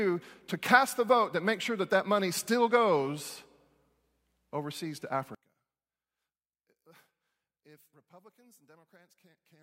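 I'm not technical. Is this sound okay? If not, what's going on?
No. From 5.35 s, just after "overseas to", the speech turns faint until the end, likely one channel inverted. Unlike a dropout, a faint ghost of it remains.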